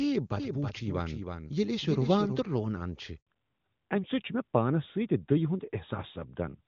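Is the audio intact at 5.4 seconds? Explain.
No. From 3.27 s to the end, the call has fallen back to narrowband. Its sound fits a switch from the AMR-WB (HD Voice) codec to AMR-NB. Everything above 4 kHz is gone, so the speech turns duller and boxier. Unlike a gradual filter or a low-rate wideband codec, this cut happens abruptly, right after a wider-band stretch.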